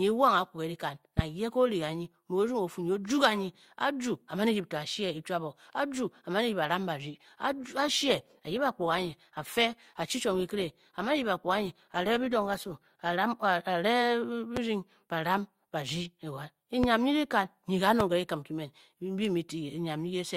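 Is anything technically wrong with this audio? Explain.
Yes, there are two problems.

From 7.14 to 13.14 s, the stream drops to a lower bitrate. The speech suddenly degrades: codec smearing rises, which fits a switch from about 64 to about 24 kbit/s Opus. The player fetched a cheaper version when the connection slowed. Unlike a dropout or buffering stall, there is no gap or timing break. Only the quality changes, abruptly in and out.

Three single loud pops follow, at 14.57–14.59 s, 16.84–16.86 s and 18.00–18.03 s. Each is a sharp pulse roughly 15 dB above the speech, lasting about 25 ms, with the speech continuing unbroken beneath it. This is likely a voltage spike from a plug, switch, static or driver glitch. Unlike a click from a sample discontinuity, these are louder, thumpier, and leave no gap.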